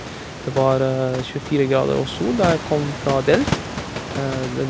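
No technical faults can be heard in the speech, which sits about 10 dB above the room noise and has nothing above 8 kHz after the call path.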